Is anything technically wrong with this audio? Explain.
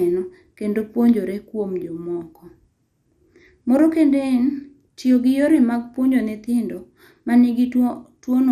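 Yes. MP2 compression, throughout the speech: nothing reaches above 15 kHz, and a dull, gurgling graininess points to likely MPEG Layer II coding, fitting a low 80 kbps bitrate.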